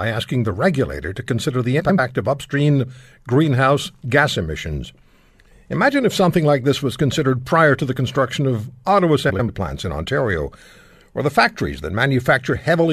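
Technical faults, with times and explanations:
1.80–1.99 s and 9.30–9.49 s, frames out of order: a brief garbled flutter, after "regulator to consider the" and after "the construction of auto". Two neighbouring blocks of roughly 93 ms each were decoded in swapped order, which fits runs of four frames each, so the halves play exchanged with no time lost.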